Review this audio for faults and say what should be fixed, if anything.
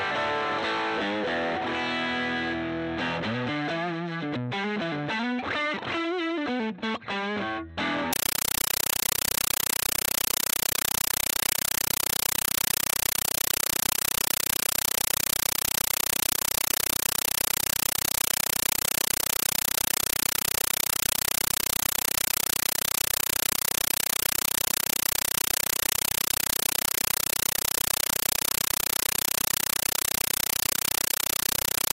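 From 8.13 s right through to the end, the sound is replaced by chattering static: a compressed stream played as audio. The bursts repeat 31.25 times a second, each about 8 ms of noise followed by silence, which fits a Dolby Digital (AC-3) frame stream sent over S/PDIF or HDMI and taken as plain PCM samples instead of being decoded. You're hearing the raw coded data itself. To prevent it, set the player or receiver to decode the bitstream, or switch the output to PCM.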